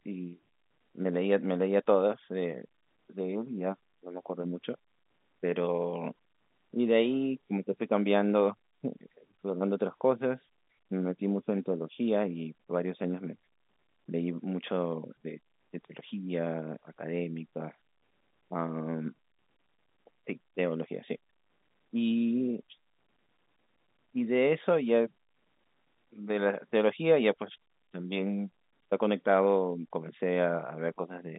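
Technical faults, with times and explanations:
The speech sits in a telephone band of roughly 150 Hz to 3.7 kHz, consistent with an ordinary G.711 line at what sounds like 64 kbps, and nothing in the signal departs from what that channel normally delivers.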